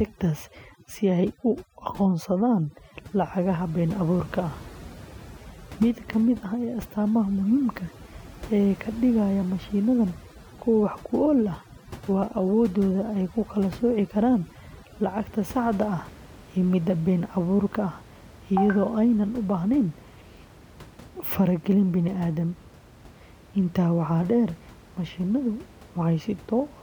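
From the start until 15.41 s, just before "saxda ah", the background sinks to near silence flecked with twinkling specks. This is overdone noise removal: a noise reducer set too strong cuts individual frequency bands near its noise estimate, and the quieter parts of the speech vanish along with the room noise, which sits about 21 dB below the speech.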